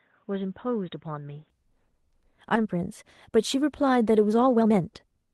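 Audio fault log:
0.0–1.5 s, input switched to a poorer device: The input was most likely running on a lower-grade microphone or a headset call profile before returning to the main one. That device passes nothing above 3.8 kHz, so the opening sounds dull and boxy, about 5 dB quieter, with a faint noise floor of its own sitting roughly 45 dB under the signal. At 1.5 s the sound opens up and brightens with no silence at the changeover.
2.55–2.57 s, skip ahead: Audio that was still waiting to be played was thrown away, and playback jumped straight to later material. Roughly a second of sound is missing and nothing fills the gap, so the two sides meet almost seamlessly. The result is an abrupt discontinuity: the sound lurches forward mid-flow, and the delay through the system drops by about the same amount.
3.28–5.29 s, jitter buffer speed-up: The receive buffer was holding more audio than its target and shortened it by cutting out many small pitch-period-sized pieces in quick succession. 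Playback runs at about 116% speed while the pitch stays where it was, so this stretch sounds rushed. Around 300 ms of material is removed in total across these two seconds.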